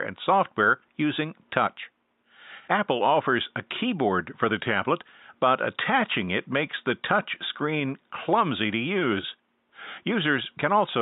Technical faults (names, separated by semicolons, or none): none